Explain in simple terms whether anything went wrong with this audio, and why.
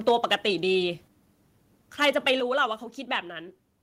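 Microphone overload shows up from 0.08 to 0.35 s and again from 2.01 to 2.3 s. The speech turns harsh and crackly on its loudest moments, likely because the input was set too high, so the tops of those peaks were chopped flat.

Microphone volume stepped down three times, at 0.09, 1.08 and 2.4 s. Each time the speech and background suddenly get quieter in one jump, likely the call software reacting to the too-loud input by turning the microphone down, a bit more each time.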